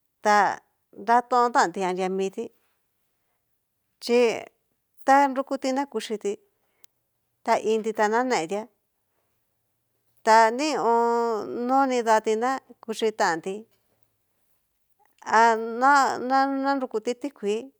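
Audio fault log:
Nothing stood out on listening to the speech in this recording.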